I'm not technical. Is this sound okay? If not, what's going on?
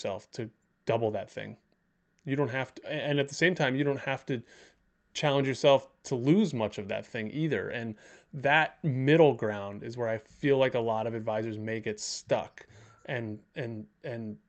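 Yes, this speech sounds fine, with nothing going wrong in it, just the ordinary sound of a normal internet call.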